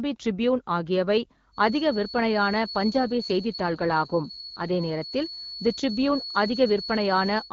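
From 1.51 s to the end of the clip, the loop between a loudspeaker and the microphone is likely sitting right at the edge of instability. A single frequency keeps recirculating without ever building into a howl. The result is a feedback whistle: a thin, steady tone near 4.4 kHz, roughly 10 dB below the speech, running behind everything and swelling and fading slowly in level.

From 2.90 s to 4.75 s there is an AMR rate drop. The link appears to push the AMR-WB codec down from its normal 12.65 kbit/s to a lower mode, which fits a step to 8.85 kbit/s. The codec spends fewer bits on the voice so it can protect against errors. The bandwidth stays the same and nothing drops out, but the speech turns rougher and more synthetic until the rate recovers.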